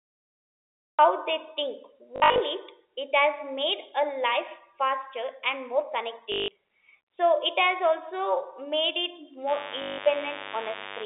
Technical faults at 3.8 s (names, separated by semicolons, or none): none